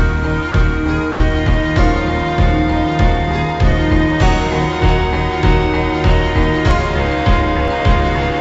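The sound passed through a call path whose band stops at 7 kHz, consistent with a wideband codec such as G.722. Twice the signal briefly gives way to steady low-level noise, from 0.52 to 0.54 s and from 1.12 to 1.20 s. This is likely sound dropped by the voice detector: the sender treated that stretch as background and stopped transmitting, and the receiver filled the 20 ms and 80 ms gaps with comfort noise. Small skips forward occur at 3.72, 6.71 and 7.68 s, each losing roughly 10, 10 and 20 ms. There is no silence at these points, only the two sides joined directly, which points to dropped buffers from overruns where samples were overwritten before being read.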